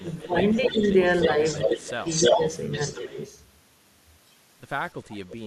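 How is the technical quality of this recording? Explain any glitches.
The recording has two recurring faults, both from a speakerphone path with an echo canceller that is struggling.

Echo leak, at 0.0–0.3 s, 0.53–3.26 s and 5.05–5.35 s: a delayed copy of the speech, about 0.31 s behind, is heard, likely because a loudspeaker's output reached the far microphone and was not fully cancelled before being sent back. The first and last stretches are faint, about 30 and 20 dB down, while the long middle stretch is strong, only about 5 dB below the speech.

Speech suppressed in double talk, at 0.01–0.36 s, 0.53–0.81 s, 1.66–1.87 s, 2.29–2.4 s and 3.03–3.18 s: the speech briefly dips in level, each time for roughly a tenth to a fifth of a second, by around 10 dB at most points, about 15 dB at the start and only about 5 dB near 2.3 s. The likely cause is the canceller failing to separate the local talker from the returning echo while both were present, and turning everything down together.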